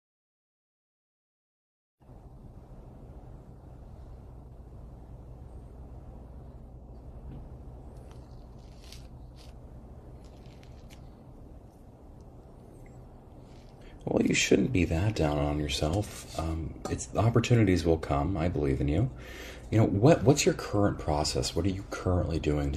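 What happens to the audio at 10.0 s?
At about 9.96 to 10.01 s there is a burst of damaged data in the compressed stream, lasting roughly 50 ms. Some of the encoded bytes at that point are wrong, so the decoder misreads or discards those frames, loses frame sync and has to hunt for the next valid header before normal decoding resumes. The result is a short, unnatural chirp or blip that cuts across the speech.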